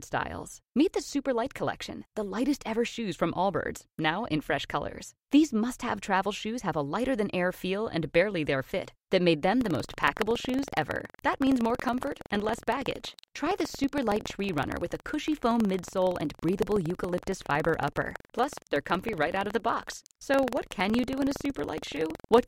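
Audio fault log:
9.57–22.48 s buffer tearing: after "their fit that made", write and read positions cross, splicing audio about 150 ms old into each buffer. The resulting 21.5 Hz rattle fits 2048-sample buffers and shows as evenly spaced vertical spectrogram lines.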